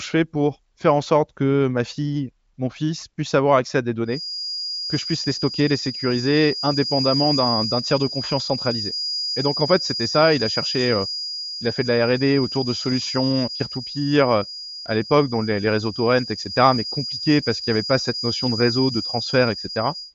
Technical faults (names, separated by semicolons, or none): feedback whistle